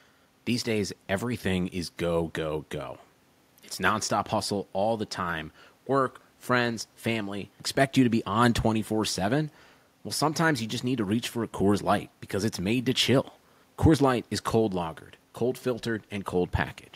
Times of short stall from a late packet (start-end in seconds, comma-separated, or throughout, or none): none